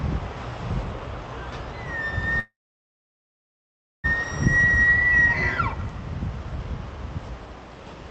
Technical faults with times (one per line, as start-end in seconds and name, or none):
2.39-4.06 call audio freeze